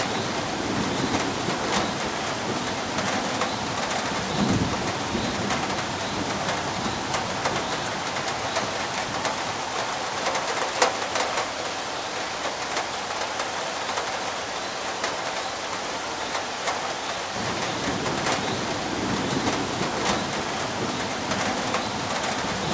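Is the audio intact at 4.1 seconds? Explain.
Yes, at 4.1 seconds the audio is intact, with no dropout, click, distortion or other fault to be heard at that moment.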